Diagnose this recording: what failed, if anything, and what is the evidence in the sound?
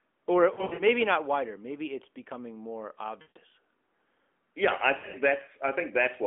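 Lost AMR speech frames on the radio link: at 0.54–0.83 s before "not wider", 3.22–3.38 s after "it's becoming more" and 4.98–5.17 s, the decoder repeats the last pitch and vocal-tract settings with shrinking gain. This shows as frozen, fading harmonics and decaying waveform envelopes.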